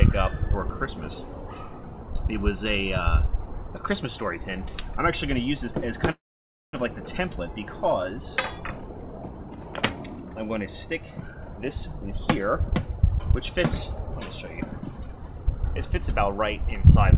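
Call audio over a narrowband call path, with nothing above 4 kHz, which fits G.711 mu-law at 64 kbps. A call audio freeze runs from 6.11 to 6.76 s: a brief fading buzz drops to silence for about half a second, then the audio resumes intact, now running about 0.62 s late. The likely cause is delayed packets emptying the jitter buffer.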